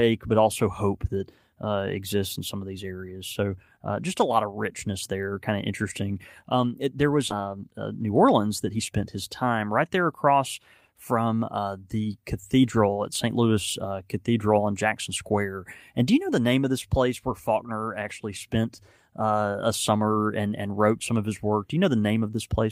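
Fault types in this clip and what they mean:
skip ahead: Right after "it there was", at about 7.29 s, playback jumps forward and roughly a second of speech is lost. That stretch was dropped while later audio was already waiting, so the two sides are joined directly with no silence or fill between them. On a waveform the envelope changes abruptly at a single point. On a spectrogram the harmonic pattern breaks along a sharp vertical seam with no gap.
jitter buffer speed-up: From 8.02 to 8.80 s, just before "spent his time right", the speech runs about 7% fast at unchanged pitch and sounds hurried. The buffer was holding more audio than its target, so it cut many short pieces of one or a few pitch periods in a row, about 70 ms in total, to reduce the delay. On a waveform the syllables are squeezed closer together in time. On a spectrogram the harmonics stay at the same frequencies while the syllables are compressed horizontally.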